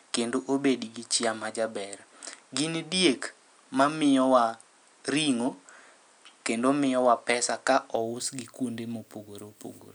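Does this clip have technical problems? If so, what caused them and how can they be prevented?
Yes. From 0.0 to 7.96 s the sound is duller, with nothing above 10.1 kHz, and it opens up without a gap just before "ous gi kuonde". That points to an input switched to a poorer device, likely with its own faint noise floor and a level about 5 dB different. On a spectrogram the top band sits empty until 7.96 s, and the waveform shows a small step in level there. Fixing the input device in the system settings before recording prevents the switch.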